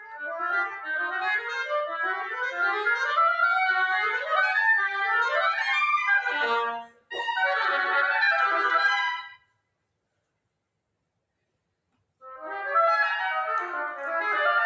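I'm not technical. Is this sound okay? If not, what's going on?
No. A noise suppressor, a tool built to clean up background noise on voice calls, was left running on this audio even though it isn't speech. It mistakes steady, lingering parts of the sound for noise and keeps turning them down a little, so the level gently rises and falls, a mild pumping or wavering throughout. Sharp beginnings of sounds get through mostly intact. That separates it from an ordinary volume fade, which would dip everything evenly.

There are also four moments of sound cut by the noise suppressor, where it pushed harder and a held or fading sound briefly sinks or has its tail chopped short: from the very start to 0.22 s, 0.72 to 0.87 s, 6.82 to 7.11 s, and 9.31 to 9.61 s. The two later ones are the deepest, each lasting about a third of a second. Unlike a dropout, where everything goes silent, here mainly the sustained parts sink while sudden sounds remain.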